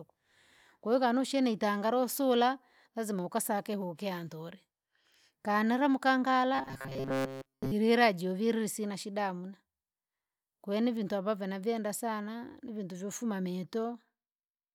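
From 6.55 to 7.72 s the speech collapses into a rigid, metallic buzz fixed at 134 Hz, with the phrasing still loosely traceable underneath, until normal sound returns just before "juvile sina shida hamuna". This is robotic sound from repeated short buffers. The likely cause is new audio arriving too seldom, so playback loops a fragment of roughly 7.5 ms, which fits the 134 Hz pitch, for most of that stretch while the real signal is skipped.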